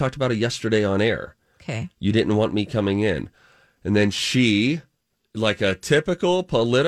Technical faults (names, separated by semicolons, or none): none